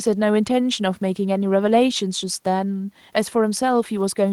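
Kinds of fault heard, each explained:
No technical faults heard.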